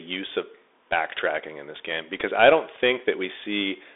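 Bluetooth CVSD headset codec, throughout the speech: the band runs only from about 300 Hz to 3.6 kHz, and the coarse, grainy texture fits a 64 kbps CVSD link. This codec sends one bit per sample that only says up or down, adapting its step size, so fast, loud high-frequency movement outruns the step and distorts. The codec damage is plainly audible: s sounds come out scratchy, and a granular hiss sits beneath the speech.

Bluetooth headset packet repeated, at 2.20 s, just before "I don't": voice packets between headset and phone went missing, and the chip decoded the previous packet's bits again in their place. About 7.5 ms of sound was replaced, which fits two consecutive lost packets at 3.75 ms each. This run of repeats every 3.75 ms gives a brief buzz near 267 Hz until good packets return.

Dropped buffer (overrun), at 3.00 s, just after "I don't": a sudden jump forward in the speech, with no gap of silence, as though about 20 ms of audio was cut out and the two sides were spliced together directly. 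The likely cause is the recording software failing to collect its samples before the hardware overwrote them, so that block was lost and the remaining audio was joined edge to edge.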